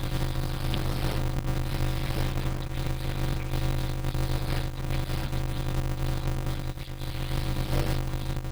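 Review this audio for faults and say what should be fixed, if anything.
A steady 100 Hz buzz runs through the whole speech clip, which also plays at about 0.53 times normal speed while keeping its timbre. This is a block size mismatch (padded): each block carries only part of the audio, which fits 256-sample writes, and the rest is zero-filled. That inserts a gap in every block and stretches the timing. Matching the block size each stage writes to the size the next stage reads prevents it.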